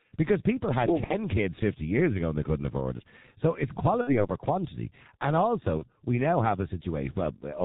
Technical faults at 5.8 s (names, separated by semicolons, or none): G.723.1 codec; VoIP packet loss concealed by the speech codec